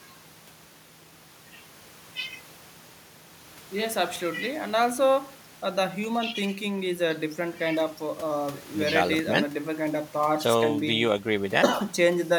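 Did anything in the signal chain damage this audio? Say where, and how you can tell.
No, nothing in this speech recording stood out on listening as damage from any stage of the signal chain.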